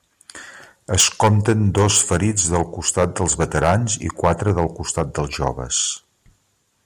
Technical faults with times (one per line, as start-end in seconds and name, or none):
0.99-2.61 microphone overload
1.01 microphone volume stepped down
2.88-3.75 microphone overload
4.23-4.64 microphone overload
4.97-5.01 microphone overload